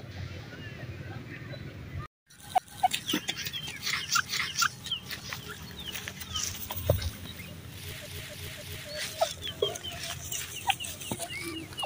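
Repeated frames show up three times. At 2.58 to 2.86 s a 279 ms block plays twice, at 4.25 to 4.72 s a 464 ms block plays twice, and at 8.06 to 8.90 s a 279 ms block loops four times. Each is heard as a stutter, and together they stretch the audio by about 1.6 s.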